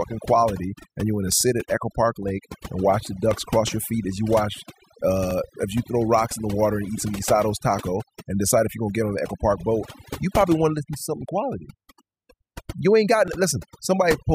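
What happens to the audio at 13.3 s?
At 13.28 s there is a brief skip where a few milliseconds of audio are missing and the two sides butt together. This is audio missing between chunks, likely a piece dropped at a boundary between 2-second processing chunks.

Overdone noise removal is also present here, as throughout. Over-aggressive noise reduction pulls frequency bands near the noise estimate far down, leaving a lowered background that breaks up into twinkling specks.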